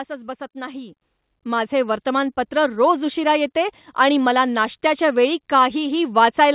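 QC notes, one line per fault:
1.02 s and 2.04 s, microphone volume stepped up: the speech and the background noise floor jump up together, by about 8 dB at 1.02 s and then a further, smaller 2 dB at 2.04 s, each landing instantly and holding at the new level. That is the input gain being raised in discrete steps. A compressor would ride the level smoothly, and a closer talker would lift the voice but leave the room noise where it was.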